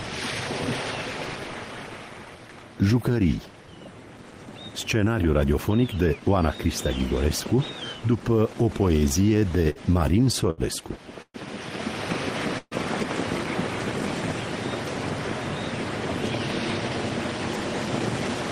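From 8.99 to 9.79 s there are repeated stalls, a stutter. Packets arrived late, and the jitter buffer kept running dry. Six brief holds, the longest 54 ms, stretch the sound. A second burst, 10.24 to 10.61 s, has four holds, up to 74 ms. Nothing is lost, but the audio drags.

At 11.22 s a call audio freeze holds the last sound for 125 ms. It fades to 50 ms of silence, then resumes where it stopped. Another at 12.58 s lasts 131 ms, ending in 30 ms of silence. The likely cause is delayed packets emptying the buffer.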